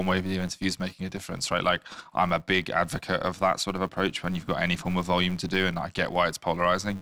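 Throughout, a filter restarted on every block leaves a 188 Hz buzz, fitting 256-sample blocks; unlike mains hum, it rises and falls with the speech level.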